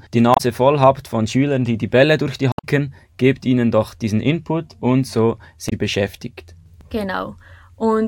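A German speech recording carries three short bursts of damaged data in a compressed stream: 0.33 to 0.41 s, just before "voll habt von"; 2.51 to 2.65 s, between "durch die" and "gebt ihnen doch diesen"; and 5.66 to 5.73 s, right after "und so". In each, corrupted frames make the decoder lose sync and hunt for the next frame header, leaving a brief garbled blip. On a spectrogram these show as abrupt vertical smears breaking the speech harmonics; the waveform shows a sudden discontinuity.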